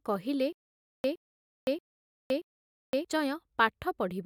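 Stutter with silent gaps, 0.53–3.05 s: a 115 ms burst repeats four times between 516 ms silences, likely a stalled stream replaying its last fragment.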